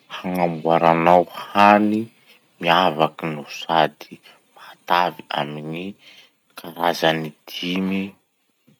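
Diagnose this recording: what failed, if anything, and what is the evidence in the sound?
Microphone overload at the converter, likely from excessive input gain: peaks at 0.86–1.17, 1.59–1.72 and 3.01–3.04 s exceed full scale by about 3, 4 and 1 dB, crackling harshly.

Microphone volume stepped down in call processing, likely reacting to that last clip: at 3.06 s, speech and background drop together by about 2 dB in one step.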